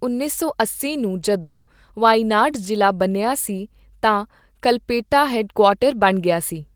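At 1.41 s, right after "ਉੱਨੀ ਸੌ ਅੱਸੀ ਨੂੰ", the speech breaks off. For about 0.26 s the last sound is stretched into a fading buzz, with no true silence under it. At 1.69 s the speech resumes with "ਵਾਇਨਾਡ ਜ਼ਿਲ੍ਹਾ ਬਣਿਆ ਸੀ". The audio in between is simply gone. This is likely a long network dropout. The stream stopped arriving, and the receiver covered the hole by continuing the last sound until new audio came.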